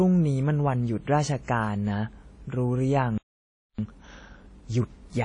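Speech, carrying plainly audible transform-codec damage from start to finish. The most likely cause is WMA compression with an early WMA encoder. The treble stops at 10 kHz, and the quantisation noise smears over tens of milliseconds around each sound, giving a ringing, washy quality with a hiss that rises and falls with the speech. All of this points to a low bitrate, in the region of 32 kbps. The encoder's long transform blocks spread the error in time, and the weaker spectral lines are discarded entirely. At 3.18 s the audio cuts out in mid-flow and stays silent until 3.79 s, a gap of about 0.61 s. This sounds like a playback stall, most likely the player running short of data or its output thread being held up, so nothing reached the output until it recovered. From 3.79 s to 4.99 s the speech is hurried along at 1.5 times normal speed while keeping its normal pitch. This is time-compressed catch-up: the player cuts out short pieces of the backlog that built up during the stall and cross-fades across the joins, so the delay is worked off without a pitch shift.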